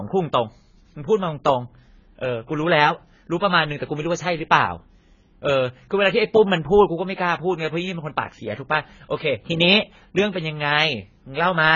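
Speech throughout, likely passed through AAC compression at a very low bitrate, with heavy damage that fits AAC-LC at around 16 kbps. Nothing survives above 7 kHz, leaving the sound dull and smeared, with a warbling, fizzy texture on sibilants and sustained sounds.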